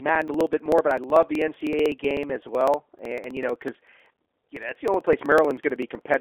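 G.729 codec damage runs throughout: the audio, consistent with an 8 kbit/s G.729A line, is rebuilt from a filter and pulse model, so nothing passes above 3.5 kHz and the speech sounds rough and synthetic.

Periodic USB or driver dropouts run from 0.09 s to 6.14 s. Every 63 ms, roughly a millisecond of audio is skipped, producing a steady train of ticks while speech is present.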